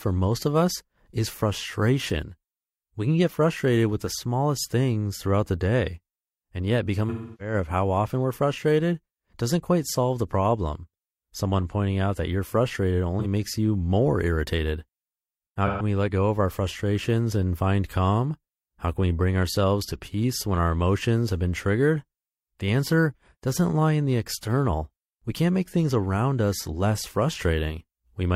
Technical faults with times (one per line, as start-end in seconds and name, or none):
7.09-7.54 AAC frame loss with concealment
13.19-13.26 AAC frame loss with concealment
15.66-15.82 AAC frame loss with concealment